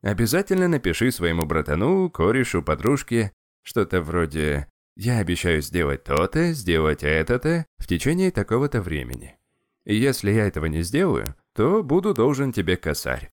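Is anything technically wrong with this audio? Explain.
Yes. Seven sharp, isolated ticks cut through the speech at 0.58, 1.42, 2.87, 6.17, 9.14, 11.26 and 12.16 s, each broadband and unrelated to what is being said. These are bit error spikes: a flipped bit throws a sample's value off by a power of two before it snaps back, one sample wide except at 6.17 s, where three adjacent samples are hit. Peaks reach about 0 dBFS at 1.42 and 11.26 s, about -6 dBFS at most others and about -12 dBFS at 0.58 s.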